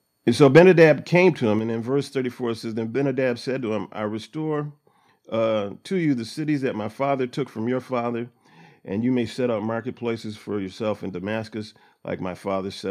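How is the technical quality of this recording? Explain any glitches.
The recording has two linked problems near the start: a brief overload followed by two sudden drops in level.

From 0.42 to 0.84 s, just before "came to", there is a microphone overload. The loudest peaks sound flattened and crackly, most likely because the input was driven about 6 dB past the converter's limit, clipping a small fraction of samples. Unlike the step-downs, this is harsh distortion, not a change in loudness.

At 0.59 s and again at 1.59 s (between "came to" and "and in verse"), the microphone volume steps down. The voice and the background drop together, by about 3 dB and then about 4 dB, each within an instant. This is likely the call software reacting to the overload by cutting the device's input gain. The level falls abruptly.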